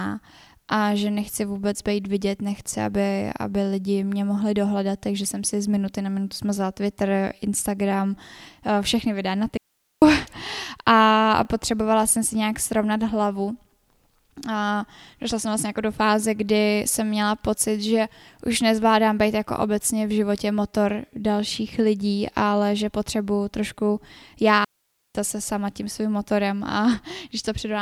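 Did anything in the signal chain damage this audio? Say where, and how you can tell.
Yes. At the driver or buffer stage, audio failed to arrive in time twice, so a repeated buffer played once more at 2.7 s, right after "nechci vůbec být vidět", and again at 11.45 s. Each repeat of about 10 ms of speech is heard as a brief click or buzz rather than a stutter.

At the wireless link, a digital wireless dropout occurred when the receiver lost too much data and muted with a very short fade. From 9.57 to 10.02 s, after "eh všechny videa na", and from 24.64 to 25.15 s, before "zase sama tím svým", the speech drops into clean near-silence for about half a second, with no noise burst on either side.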